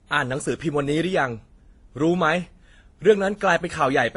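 Throughout the speech, smeared, watery artefacts of different kinds sit on top of one another, and nothing survives above 10.6 kHz. A spectrogram shows a flat ceiling there with blotchy upper bands. This is likely transcoding between lossy codecs, ending in WMA.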